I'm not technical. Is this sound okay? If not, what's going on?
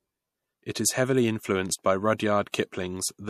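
No. There is pre-echo twice, both after "is heavily influenced by": a hiss at 2.18 s and another from 2.52 to 2.54 s, each leading into a sharp sound. The compression cuts the audio into blocks about 36 ms long and spreads its noise evenly across each one. Because it never switches to shorter blocks, noise meant for the loud attack leaks into the quiet moment just before it, so the attack sounds blurred.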